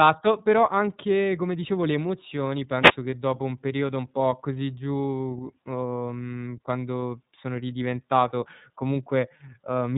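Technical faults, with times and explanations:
throughout: iLBC codec. Nothing above about 3.8 kHz survives, and each 30 ms frame is coded on its own, leaving the speech plainly rough and synthetic, a sound that fits iLBC's 13.33 kbps mode and its coarse per-frame excitation model.
2.80 to 2.96 s: wireless microphone noise hit. A short burst of static swish lasting about 0.16 s is heard as the FM radio link fades through cancelling reflections, letting receiver noise rise before the signal recovers.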